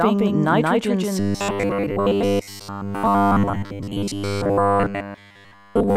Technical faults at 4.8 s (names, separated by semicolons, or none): doubled audio track; robotic sound from repeated short buffers